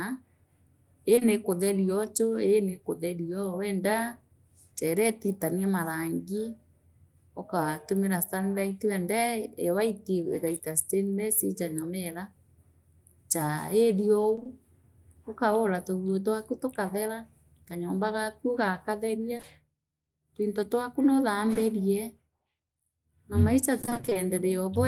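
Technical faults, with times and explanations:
1.15–1.23 s, short concealed packet loss: two back-to-back 20 ms pieces of speech arrived too late, so the decoder extended the preceding sound for about 40 ms and blended back, leaving a brief smear.
19.37–19.45 s, short concealed packet loss: the same 40 ms patch, two consecutive 20 ms fills built from the last sound, heard as a short wobble.
21.53–21.57 s, short concealed packet loss: just after "twinto twaku", a single 20 ms hole was filled by continuing the previous sound, giving a brief smear.
14.35–14.47 s, repeated packet loss (robotic sound): three separate 20 ms losses in about 0.12 s, so half the stretch is synthesized. Each patch continues the last sound before the next gap arrives, giving a choppy texture.
23.81–24.17 s, repeated packet loss (robotic sound): nine 20 ms gaps in about 0.36 s, again half concealed. The rapid alternation of real and extrapolated audio makes the speech sound robotic and broken, with pieces missing.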